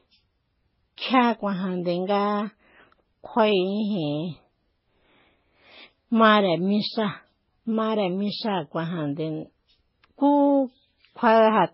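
Throughout the speech, nothing is present above 5.5 kHz, and two distinct layers of coding damage are heard together. There are the artefacts of one low-rate encode, and on top of them a separate set added by another. The sound points to transcoding between lossy codecs, likely a very low-rate MP3 pass followed by a Vorbis encode at a similarly low rate. The second encoder spent bits reproducing the first one's errors while adding its own, and the lower cut-off carried through.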